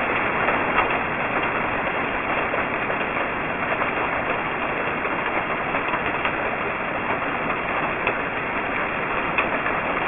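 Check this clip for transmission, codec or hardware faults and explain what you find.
One fault runs through the whole clip: aliasing. Content above 3 kHz folds back as loud, unrelated tones, making highs gritty and metallic. This fits an unfiltered drop to a 6 kHz rate.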